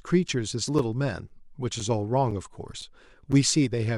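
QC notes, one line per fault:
0.28, 0.79, 1.29, 1.80, 2.31, 2.81, 3.32 s: gap between chunks. The speech arrives in half-second blocks with about 7 ms of silence inserted at every join, so nothing is lost but the flow is briefly cut seven times, heard as short holes or dips at regular intervals. On the waveform each join shows a near-silent notch with sharp edges. On a spectrogram it appears as a thin vertical blank stripe through all frequencies, repeating roughly every 0.51 s.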